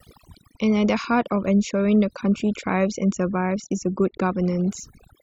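Throughout, overdone noise removal cuts bands judged noisy, leaving twinkling specks in near-silent gaps and quiet parts of the speech cut with them, unlike a gate, which mutes everything at once.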